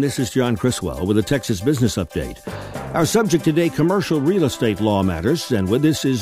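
Nothing here calls for a fix: the audio holds steady the whole way, with no technical fault to point to anywhere along it.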